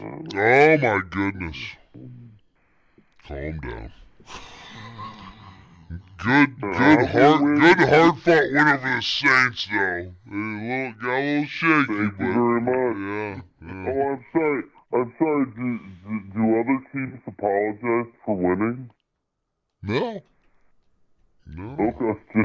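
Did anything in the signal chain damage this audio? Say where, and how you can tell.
Yes, at playback: a wrong sample rate, probably 24 kHz audio played at 16 kHz without conversion, slows everything to 0.667x and lowers pitch 7 semitones throughout.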